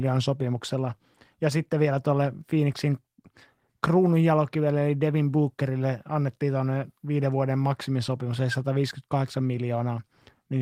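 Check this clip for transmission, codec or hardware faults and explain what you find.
Nothing faulty turns up anywhere in this speech recording.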